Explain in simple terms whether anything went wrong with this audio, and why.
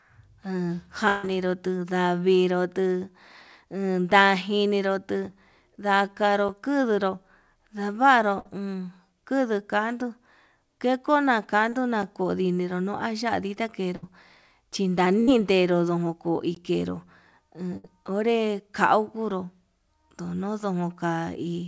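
Several things went wrong in the sound.

Near 1.08 to 1.25 s, audio likely stopped arriving for a moment, a long network dropout. The receiver stretched the last sound into a fading buzz or hiss for about 0.16 s before the audio resumed.

At 6.49, 12.03 and 16.55 s, the program likely failed to deliver audio in time, leaving a block of digital silence. The first two are heard as a tick or dip, the last as a short hole.

At 8.39, 13.96, 15.20 and 17.77 s, a burst of packet loss dropped about 60 ms each time. The gap was filled with a held buzz or fading hiss, and that piece is missing.

At 11.69 s, a short concealed packet loss hid a 40 ms gap by continuing the previous sound, leaving a brief smear.

The call connection itself carries nothing above 8 kHz.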